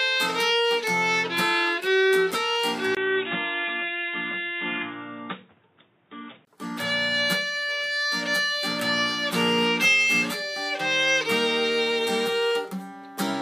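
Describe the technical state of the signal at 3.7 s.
At 3.7 s the signal is band-limited: nothing above 3.8 kHz, so the sound is dull and boxy. This runs from 2.95 s to 6.47 s and begins with a 20 ms gap. The likely cause is an input switched to a poorer device, a narrower-band microphone or headset path with its own tone and noise. A new background noise sits roughly 35 dB under the signal, while overall level stays about the same.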